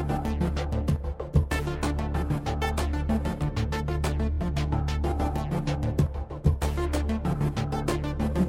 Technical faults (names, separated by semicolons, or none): repeated frames